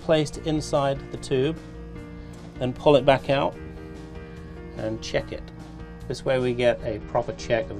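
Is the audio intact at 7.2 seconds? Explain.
No. A Bluetooth SBC bit pool drop runs from 6.85 s to the end at 7.8 s. The link cut the bits per frame, which fits a fall from a bit pool of 31 to 11, near 83 kbps. The top sub-bands starve, so the treble dulls and gritty noise rises.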